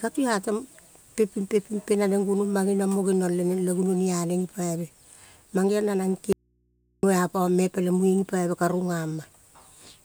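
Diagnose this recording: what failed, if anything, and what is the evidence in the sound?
Audio dropout to a faint residue at 6.33–7.03 s, before "a pame peleng": speech snaps abruptly to hum about 45 dB down, not a natural pause. Likely an intermittent analogue connection.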